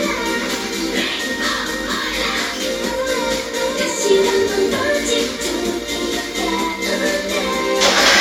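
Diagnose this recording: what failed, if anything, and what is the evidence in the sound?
Nothing in the recording points to a failure at any stage of the chain: the sounds arrive as a continuous, intact signal with nothing to trace back to wiring, conversion, buffering, processing, transmission, storage or playback.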